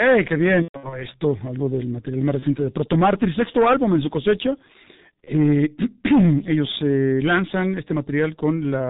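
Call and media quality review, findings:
Muffled, hoarse speech with smeared consonants across the whole clip; no content above 4 kHz. G.723.1 codec, heavy damage. Fits its 6.3 kbit/s mode: 30 ms frames and a slowly updated voice model flatten fast articulation.

Stretched sound fading into weak, distorted speech at 0.62–1.04 s, before "esto algo del material". Also shorter dropouts at 2.39–2.45 s (between "algo del material más" and "de proto") and 5.24–5.32 s. VoIP packet loss concealed by the speech codec. The decoder extrapolates its last pitch and filter at falling gain. The first burst fits about 210 ms lost over 300 ms, with the longest run about 120 ms. The later two fit single 30 ms frames, and recovery lags after each.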